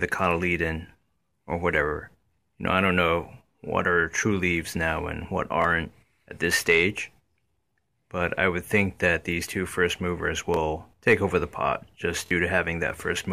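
New audio arrived late three times, so the last 23 ms buffer, which fits a 1024-sample block, replayed: a hard-edged stutter at 5.62–5.64 s and 10.54–10.57 s, and a doubled repeat at 12.26–12.31 s.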